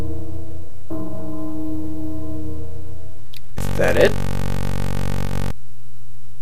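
From 3.57 to 5.51 s, a block size mismatch (padded) inserts zero gaps. A 46.9 Hz buzz results. Audio slows to 0.861 speed, timbre unchanged.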